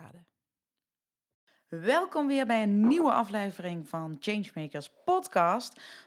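Nothing in the recording stood out as a technical problem on listening.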